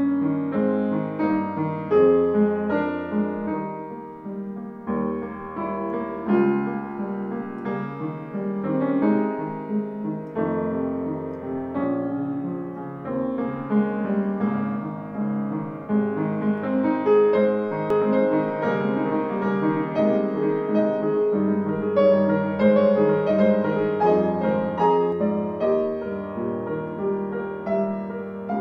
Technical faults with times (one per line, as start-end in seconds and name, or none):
17.90-25.12 doubled audio track